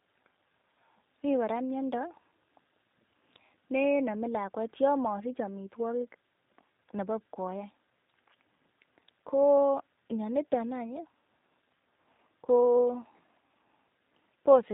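From start to finish, the speech has passed through a G.729 codec, most likely the G.729A variant, which fits an 8 kbit/s narrowband coder. Rather than carrying the waveform, it resynthesises each 10 ms frame from a vocal tract model, a pitch predictor and a few coded pulses, and drops everything above 4 kHz. The result is plainly audible: dull, band-limited speech with a slightly rough, synthetic quality.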